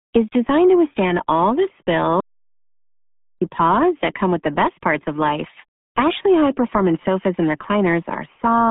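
The speech runs through the RealAudio 14.4 codec, a dial-up-era low-rate coder consistent with roughly 8 kbit/s, for the whole clip. Only about 150 Hz to 3.6 kHz survives, with nothing above 3.8 kHz, and the heavy coding damage leaves the voice muffled and gargly.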